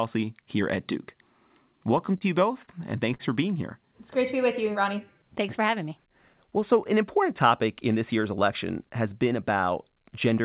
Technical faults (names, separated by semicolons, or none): repeated stalls (stutter); short stall from a late packet